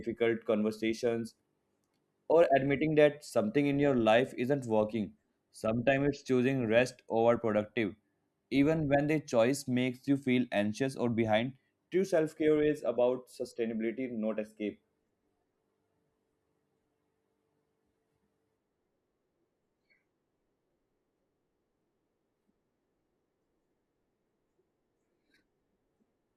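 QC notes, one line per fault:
Nothing stood out on listening to this speech clip.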